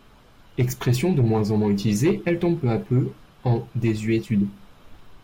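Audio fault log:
No fault is heard anywhere in the speech.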